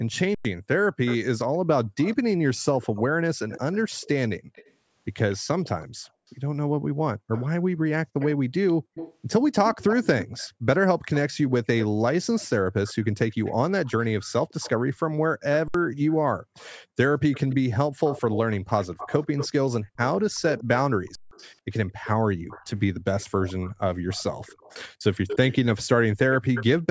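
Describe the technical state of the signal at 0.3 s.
An echo leak is running through 0.3 s, spanning 0.12 to 6.32 s: a faint copy of the speech trails it by about 159 ms, sitting roughly 20 dB down, most likely from a far-end echo canceller failing to remove what its loudspeaker fed into its microphone. On a spectrogram it shows as weaker, time-shifted repeats of each harmonic stack.

Right after, from 0.345 to 0.448 s, comes an underrun with held sample. The output buffer emptied and the converter froze at its last value for 103 ms, so the waveform runs as a flat line and the sound simply stops. About a tenth of a second of live audio was lost before playback resumed.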